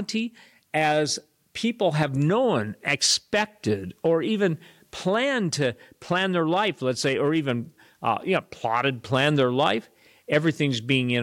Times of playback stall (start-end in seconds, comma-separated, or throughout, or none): none